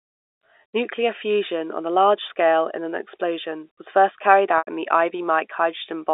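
From 4.58 to 4.67 s, just after "explosion was first carried" and before "in the", there is packet loss with pitch repetition. About 90 ms of audio went missing, consistent with nine 10 ms packets, and the receiver bridged it by looping the last pitch period, giving a brief held, buzzy tone over the narrowband G.711 telephone line.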